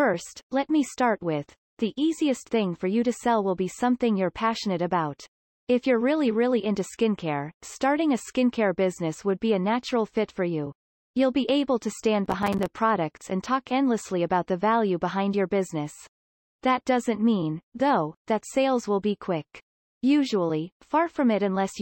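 From 12.26 to 12.66 s, after "be able to stand", the processor repeatedly missed deadlines on small buffers, roughly 5 ms each. The silent gaps produce gritty processor overload crackle.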